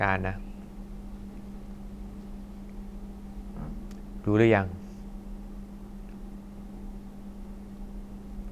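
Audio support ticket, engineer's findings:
Listened to the whole speech clip and found nothing to flag on the audio path, so no fault to log here.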